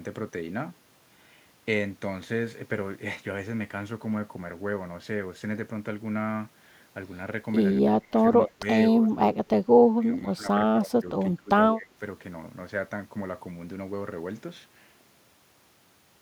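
From 7.99 to 8.21 s, 8.45 to 8.65 s, 8.92 to 9.67 s, 9.84 to 10.55 s, 10.71 to 11.05 s, 11.35 to 11.51 s and 11.73 to 11.97 s, the speech dips by roughly 15 to 30 dB. This is speech suppressed in double talk, likely an echo canceller failing to separate its own talker from the overlapping far-end echo and turning both down. Unlike packet-loss gaps, these are ducked, ragged stretches of varying depth rather than clean silences.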